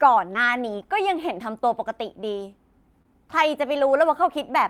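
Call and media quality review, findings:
Short concealed packet loss at 0.33–0.36 s: brief smear where about 20 ms of audio arrived too late or not at all. Jitter buffer and decoder concealment patched it by extending the preceding sound for roughly 11 ms, then crossfading back.

Short concealed packet loss at 3.02–3.06 s: same deal, another 20 ms gap in the speech. Concealment carried the prior sound for about 19 ms before blending in, so a wobble instead of a dropout.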